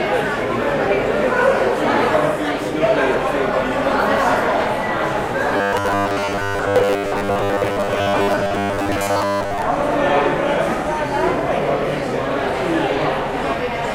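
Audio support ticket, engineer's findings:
Robotic sound from repeated short buffers, 5.57 to 9.64 s. Rigid metallic buzz at 100 Hz over the everyday sounds; most of the audio in that span repeated rather than new. Likely buffer underrun, looping about 10 ms blocks. Spectrogram: evenly spaced horizontal harmonic lines at 100 Hz multiples. Waveform: identical repeating cycles.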